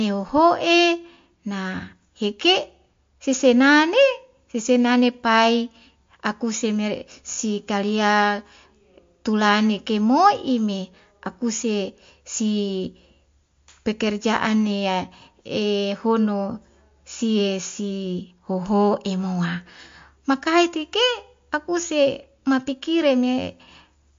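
From start to finish, the speech carries likely MP3 compression at a low bitrate, which fits about 48 kbps. Nothing sounds above 7.2 kHz, and the damage is plainly audible: weak frequency components drop in and out between frames, giving a watery, swirling texture, with metallic chirps on s sounds and smeared attacks. A simple low-pass filter would dull the top the same way but leave no swirl or chirping.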